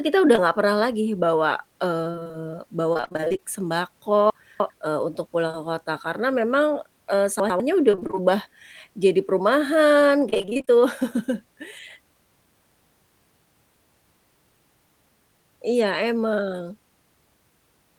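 At 0.35 to 0.39 s, between "kita udah" and "nggak pernah lagi bawa", there is a short concealed packet loss. About 20 ms of speech never arrived in time. The decoder filled the hole by extending the preceding sound, then blended back into the real signal. It is heard as a tiny smear in the speech.

From 2.11 to 2.35 s, right after "nggak pernah lagi bawa", comes repeated packet loss with a robotic sound. Six separate gaps occur, none longer than 24 ms. Together they total about 120 ms, half the stretch. Each gap is patched before the next arrives. The speech turns choppy. The same fault returns at 2.93 to 3.42 s, with twelve gaps totalling about 240 ms.

At 4.3 to 4.7 s, just before "eee untuk", chunks play out of order. One 100 ms chunk lands three chunks late, after audio meant to follow it. Nothing is missing, but the sequence is scrambled. The hard joins give a jumbled moment.

At 5.47 to 5.55 s, two short concealed losses sit back to back. 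Each is about 20 ms, which fits 20 ms packets. The result is a brief wobble.

At 7.40 to 7.60 s, chunks are out of order again. A 100 ms chunk arrives one chunk late, giving a short garbled moment.

Repeated packet loss returns at 7.91 to 8.22 s, with seven gaps totalling about 140 ms. It appears once more at 10.30 to 10.69 s, with ten gaps totalling about 200 ms. Both stretches sound robotic and broken up, with roughly half the audio concealed.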